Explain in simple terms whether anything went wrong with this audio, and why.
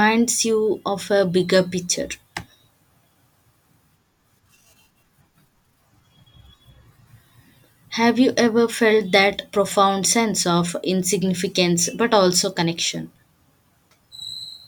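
Nothing went wrong here: the speech carries no audible dropouts, distortion, glitches or other technical faults anywhere in the recording.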